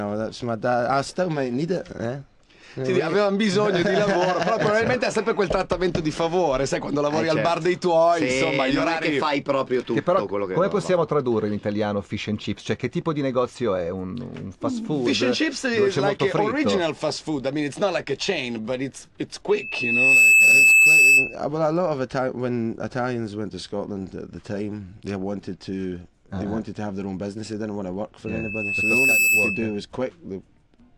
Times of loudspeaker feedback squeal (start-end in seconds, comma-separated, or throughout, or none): 19.50-21.36, 28.26-29.80